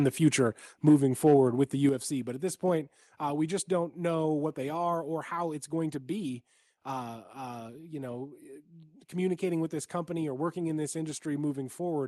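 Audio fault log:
1.26–1.34 s microphone overload: peaks flatten at about 2 dB past the converter's limit just before "with the", adding a harsh crackle, likely from input gain set too high.
1.9 s microphone volume stepped down: just after "with the", voice and background drop together by 6 dB, likely the call software cutting input gain after the clipped peak.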